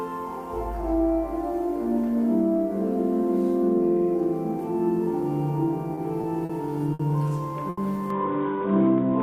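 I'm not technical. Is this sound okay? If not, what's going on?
No. Five short stalls from late packets occur at 5.95, 6.21, 6.45, 6.93 and 7.69 seconds, lasting 20 to 80 ms and growing longer. Each briefly holds the sound, then resumes where it left off, so nothing is skipped.

From 8.10 seconds to the end, the sound turns dull and boxy, with a faint new background noise. This is likely the input switched to a poorer device. The change happens at one instant, with no gap and no jump in loudness.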